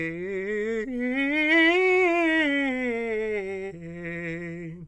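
No technical faults can be heard anywhere in this music.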